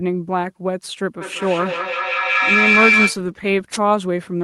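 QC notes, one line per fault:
1.21–3.24 s, feedback howl: the mic-to-speaker loop gains level each pass, building a tone around 2 kHz that pulses roughly every 200 ms, peaking about 3 dB above speech.
3.72–3.78 s, wireless microphone noise hit: a brief static swish as the FM radio link fades and receiver noise rises over the speech.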